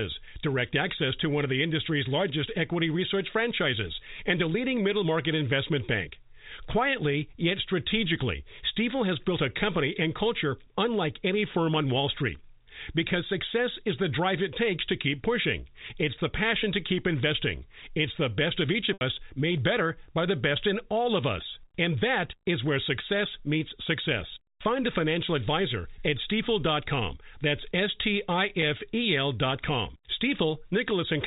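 Speech heard over a G.711 telephone channel, with nothing above 4 kHz, shows packet loss with pitch repetition twice. At 18.93 s, between "the best of each" and "made better by the", about 80 ms goes missing, which fits eight lost 10 ms packets. The receiver loops the last pitch period, so a held, buzzy tone fades before speech cross-fades back. A spectrogram shows flat, evenly spaced harmonic stripes. A single 10 ms dropout at 28.62 s leaves a brief stretch of repeated pitch period in the waveform.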